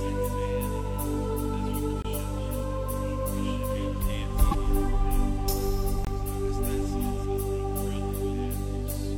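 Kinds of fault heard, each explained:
Gap between chunks: The music stops for about 23 ms at 2.02 s and again at 6.05 s. The two gaps are 4 s apart, which fits audio delivered in 4-second chunks with silence inserted at each join.
Broken MP3 bit reservoir: From 4.51 to 4.55 s the music jumps ahead with a short garbled disturbance. This is likely a damaged bit reservoir: after dropped frames, the next frame borrows data that isn't there. The 26.1 ms frame timing fits MP3.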